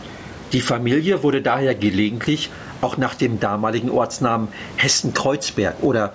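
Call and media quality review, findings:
Gain pumping, throughout: level swinging around 15 dB. Likely mic gain set far too high into a fast limiter. Dynamics squashed. Room noise about 29 dB below speech.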